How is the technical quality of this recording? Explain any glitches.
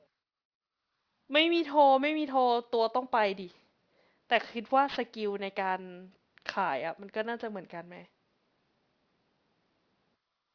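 The recording has one fault, present throughout: aliasing. The sibilants and breathy consonants come out gritty and metallic all the way through the 10.5-second speech clip, rather than just dull.

The sound points to a downsample to around 11 kHz done without an anti-alias filter. Energy above the 5.5 kHz fold point reflects back downward to unrelated pitches, roughly 25 dB under the speech. Plain band-limiting would only muffle the sound. Here the spectrum stays full right up to 5.5 kHz, with harsh, inharmonic grit added.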